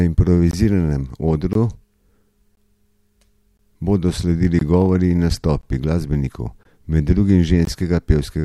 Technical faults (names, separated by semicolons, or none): gap between chunks